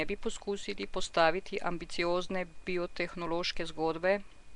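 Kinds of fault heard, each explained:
Nellymoser compression: speech throughout carries a rough, hissy halo and smeared, underwater quality, with nothing above 10.6 kHz. This is likely the Nellymoser Asao codec at a rate near 44 kbps. A spectrogram shows blocky, noise-filled bands under a hard ceiling.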